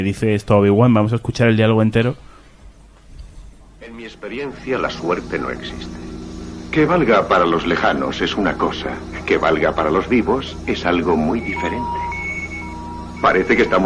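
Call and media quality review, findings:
No faults found in the reviewed audio. Nothing here needs a ticket entry.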